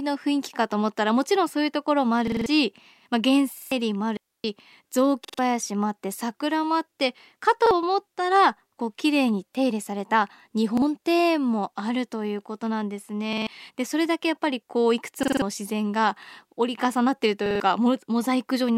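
Repeated buffer stutters at 2.28 and 3.58 s: audio arrived late, so one 46 ms chunk, which fits a 2048-sample buffer, replays with hard joins. At 4.17 to 4.44 s, a digital wireless dropout leaves a clean 272 ms hole, muted with a very short fade and no noise burst. The same repeated buffer stutter returns at 5.25, 7.66, 10.77, 13.33, 15.23 and 17.46 s, with between one and four extra plays each.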